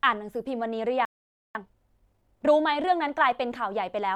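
At 1.05 s the speech cuts out for about 0.5 s in a playback stall, likely from a starved buffer; the waveform shows a flat gap until 1.55 s. From 1.55 to 2.53 s a time-compressed catch-up runs about 1.5 times faster at normal pitch; the spectrogram shows compressed syllables but unchanged harmonic spacing.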